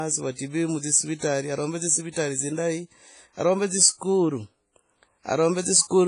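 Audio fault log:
throughout, WMA compression: the speech has a ringing, washy smear, with a hiss that swells and fades along with the voice, and nothing comes through above about 10.1 kHz. That's likely a transform codec pushed hard, at a rate that fits something like 24 kbps. Long transform blocks spread the quantisation noise across tens of milliseconds around each sound, and the weaker spectral lines get zeroed out, so the damage here is heavy.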